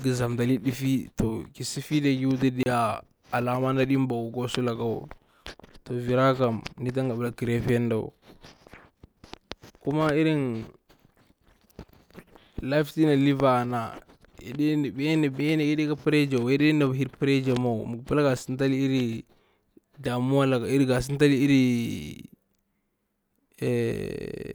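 At 2.63 s the speech drops into a block of digital silence lasting 30 ms, until 2.66 s. A run of samples has been replaced by zeros, and the sound stops and restarts with no fade, so the gap comes across as a brief hole. On a waveform it is a flat line. A spectrogram shows a clean vertical gap with broadband streaks at both edges.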